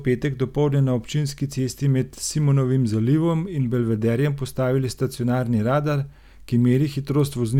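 Speech recording with no technical faults detected at any point.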